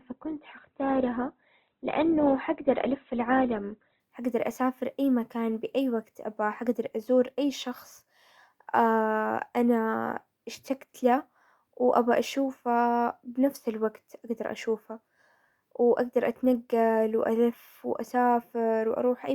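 From 0.0 to 4.0 s the speech is dull and band-limited, with nothing above about 4.3 kHz and clear codec smearing. This is an adaptive stream starting at a low bitrate. The player began on a low-quality version to start fast, consistent with Opus at around 12 kbit/s. Once it had gauged the connection, it switched up. At 4.0 s, just before "حقدر اسافر اي مكان", the treble returns abruptly, with no gap, fitting roughly 64 kbit/s.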